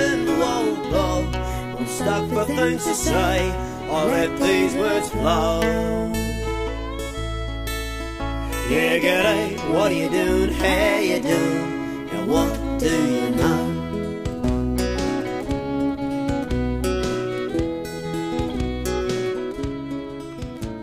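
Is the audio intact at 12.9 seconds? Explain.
Yes, the audio is intact at 12.9 seconds, with no dropout, click, distortion or other fault audible at that point.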